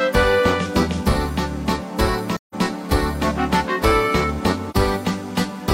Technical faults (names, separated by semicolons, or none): AAC frame loss with muting